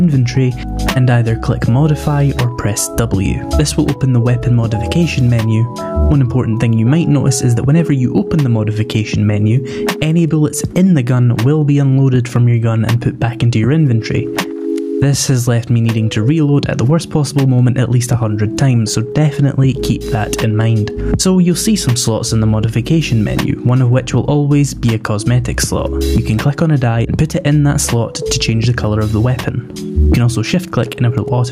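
Gain pumping runs through the whole clip: the gain is pulled down on each loud sound, a swing of around 15 dB, leaving loud and soft parts closer in level. Unlike a noise gate, which silences the gaps, this squashes the sound, likely from excessive gain driving a fast limiter.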